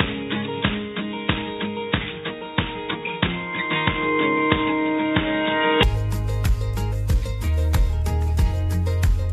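Input switched to a poorer device, from 0.0 to 5.83 s: the sound is band-limited, with nothing above 3.8 kHz, so it is dull and boxy before it opens up abruptly at 5.83 s with no gap or level jump. A narrower-band microphone or headset profile is the likely cause, with only faint added noise.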